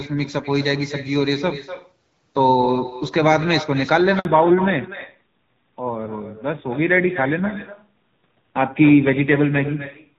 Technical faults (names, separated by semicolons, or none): echo with no canceller; handover gap; fallback to narrowband